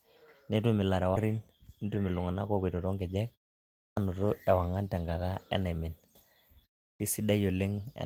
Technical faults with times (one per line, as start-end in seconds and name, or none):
1.15-1.17 skip ahead
1.25-3.55 jitter buffer speed-up
3.86-3.97 clipped start after a pause
6.90-7.00 clipped start after a pause